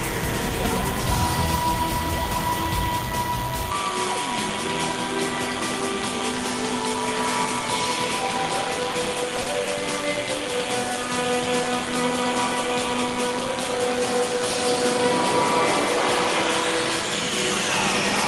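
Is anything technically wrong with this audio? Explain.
Yes, there are three faults.

DECT cordless phone buzz runs throughout: a nearby DECT unit's radio bursts every 10 ms get rectified in the audio circuit, leaving a thin 100 Hz buzz, roughly 15 dB under the signal.

At 3.72 s the sound suddenly goes duller to the end, with nothing above 11.4 kHz and a faint new noise floor. That's likely the input switched to a poorer device, with no gap and no level jump.

Between 8.91 and 9.69 s there are repeated stalls (stutter): five brief holds, the longest 50 ms, where late packets starved the jitter buffer and the last sound was stretched. The audio drags but nothing is lost.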